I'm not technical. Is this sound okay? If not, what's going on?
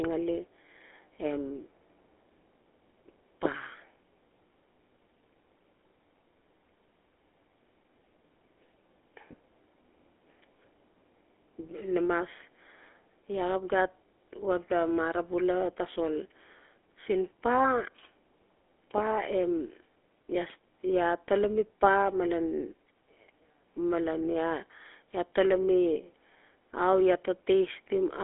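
No. The whole recording went through the GSM full-rate codec, an early mobile-phone voice compressor. Unlike a plain narrow phone line, which only sounds muffled, this adds a buzzy, gravelly roughness to the voice throughout, and everything above about 3.7 kHz is missing.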